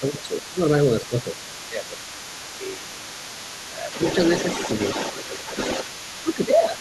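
A nearby DECT cordless phone or base station, firing a radio burst every 10 ms that the audio circuit rectifies, puts a DECT cordless phone buzz under the whole speech recording: a thin, steady 100 Hz buzz rich in harmonics, sitting only about 10 dB below the talker. The echo canceller likely failed to tell the talker apart from the loudspeaker echo while both sides spoke, so the talker's speech is suppressed in double talk from 0 to 0.6 s, 1.01 to 4.0 s and 5.86 s to the end. The voice dips by up to about 10 dB in the first and last stretches and by about 5 dB in the middle one. The same canceller also likely left part of the far end's loudspeaker signal in the microphone, so the other side's voice leaks through from 0 to 0.87 s, faintly at roughly 25 dB under the talker. It returns from 1.05 s to the end, much stronger at about 10 dB below, where a second voice comes through behind the talker.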